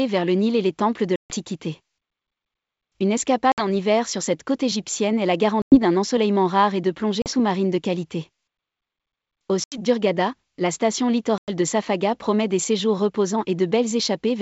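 Packet loss on an ADPCM call cuts hard-edged silent gaps at 1.16, 3.52, 5.62, 7.22, 9.64 and 11.38 s, lasting 140, 60, 100, 40, 80 and 100 ms. Each gap is a flat blank column on the spectrogram. The speech returns slightly distorted while the decoder's predictor resynchronises, all over clean G.722 wideband audio.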